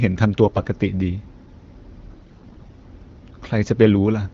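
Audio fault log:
0.44–0.68 s and 2.08–2.73 s, AMR bit errors: flipped low-priority bits misplace the excitation pulses and skew gain and spectrum values. The sound turns hoarse and gargly but keeps its pitch and level, and it is rougher in the second stretch, at around 10% bit errors against 5%. Unlike frame loss, nothing drops out.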